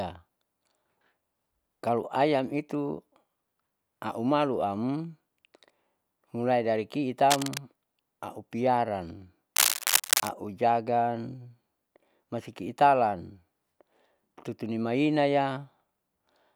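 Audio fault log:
7.30–7.58 s and 9.56–10.29 s, cable scratch noise: right after "mulai dari" there's a short patch of ragged, crackly rustle a bit under the speech, then a longer burst about as loud as the speech itself. Likely a worn lead or connector being moved, its contact flickering and spraying uneven noise bursts.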